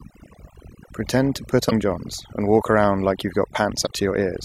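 From the start and throughout, the speech carries overdone noise removal. The noise reduction was set too hard. Any frequency band close to its noise estimate is pushed far down or cut out, and quiet parts of the voice go with it. The background drops, dotted with small twinkling specks.

At 1.67 to 1.72 s comes a short burst of damaged data in a compressed stream. Part of the encoded data was wrong, so the decoder misread those frames and lost its place until it found the next valid frame. It lasts about 50 ms and sounds like a chirp, squawk, click or short hole. The same fault returns at 3.83 to 3.87 s, about 40 ms long, with the same kind of glitch.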